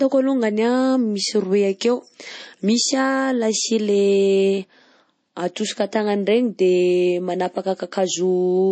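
Throughout the speech, the sound is watery and swirly, and the treble stops dead at 8.3 kHz. The cause is likely MP3 compression: a starved encoder cuts high frequencies and lets weak spectral lines flicker between frames, which fits a bitrate near 32 kbps.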